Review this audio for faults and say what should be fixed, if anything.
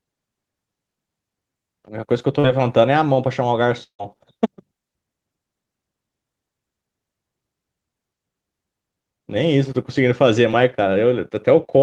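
Short concealed packet loss at 2.39 to 2.45 s and again at 10.51 to 10.55 s. About 40 ms of audio failed to arrive in time at the first point and about 20 ms at the second. The receiver covered each hole by extending the preceding sound, then crossfaded back into the real stream, leaving a brief smear or wobble where detail went missing. A larger jitter buffer or forward error correction on the link would prevent these.

Long network dropout at 3.83 to 4.01 s. About 160 ms of sound is missing. It starts as a synthetic continuation of the last sound that buzzes or hisses and fades away, then collapses into roughly 90 ms of near-silence before the audio resumes further on, with the lost stretch never recovered. The likely cause is a burst of consecutive packets lost on the network. Redundant packet coding and a more stable connection would prevent it.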